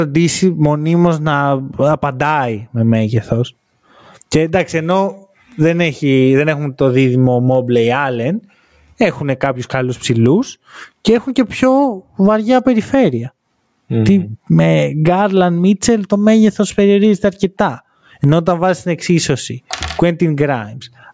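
Throughout the speech, gain pumping swings the level by around 20 dB as it is pulled down on every loud sound, likely from excessive mic gain hitting a fast limiter. Unlike a noise gate, it squashes loud and soft parts closer in level rather than silencing the gaps. Nothing above 8 kHz is present, consistent with the call's microphone processing.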